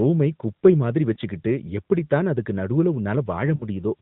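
Just after "குப்பை மாதிரி", at 1.14 to 1.17 s, and again at 3.56 to 3.64 s, there are lost AMR speech frames. The decoder patches each gap by repeating the last good frame at lower gain, so the first is a short dip or warble and the second sounds drawn out as it fades. The first fits one 20 ms frame and the second two, all through a narrowband AMR mobile codec.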